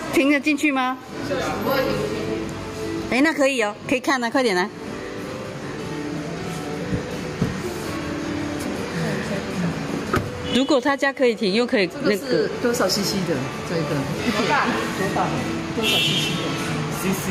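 Gain pumping runs through the whole clip: the gain ducks under every loud sound, by roughly 15 dB. The likely cause is input gain set far too high, with a fast limiter clamping each peak.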